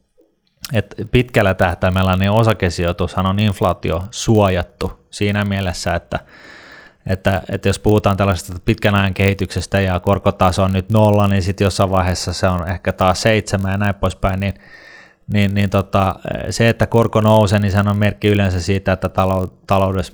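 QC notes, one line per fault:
Throughout: block size mismatch (padded). A buzz at 46.9 Hz, which fits 1024-sample reads, comes from a short zero-filled gap in every block. The speech runs 0.999 times normal speed at unchanged pitch. That steady rate and intact pitch set it apart from mains hum or resampling faults.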